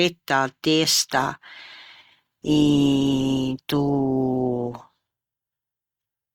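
At 1.11 s the adaptive stream drops to a lower bitrate, roughly 64 to 16 kbit/s by ear; codec artefacts rise abruptly, without a gap, through the end.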